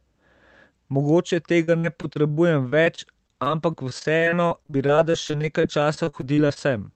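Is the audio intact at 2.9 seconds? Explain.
No. At 2.9 s the speech is inside a stretch of repeated packet loss (robotic sound) running from 1.63 to 6.58 s. Dozens of gaps, each up to 42 ms, are patched by stretching the preceding sound, giving choppy sound with pieces missing. This repeated recurrence sets it apart from a single dropout or click.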